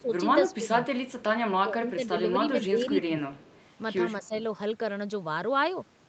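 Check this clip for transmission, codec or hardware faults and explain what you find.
Two problems show up, both pointing at echo cancellation struggling while both ends talk over each other.

Speech suppressed in double talk shows up at 0.0–0.7 s, 1.64–2.14 s, 2.7–3.23 s and 4.21–4.33 s. The voice dips by up to roughly 10 dB in short patches. The likely cause is the canceller mistaking your talker for loudspeaker echo and ducking everything.

Echo leak shows up at 0.0–1.24 s, 3.38–3.61 s and 4.23–4.38 s. There's a faint copy of the voice trailing 234 ms behind, sitting about 25 to 30 dB down. That's likely the far end's canceller letting some of its loudspeaker pickup slip back through.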